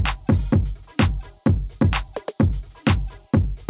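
Nothing is technically wrong with the clip; the audio simply carries the narrow band of a G.711 call path, with nothing above 4 kHz.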